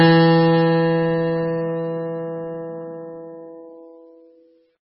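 MP3 compression runs throughout the music, heavy enough to fit a 16 kbps stream, likely from an encoder starved of bits. Nothing remains above 5.4 kHz, so the top end sounds dull, and weak frequency lines flicker between frames, giving a watery, swirling texture.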